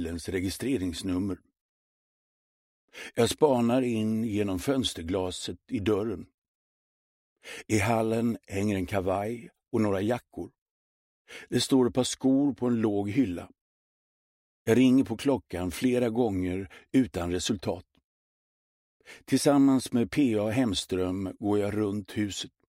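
No technical faults can be heard anywhere in the audio, and the signal holds steady throughout.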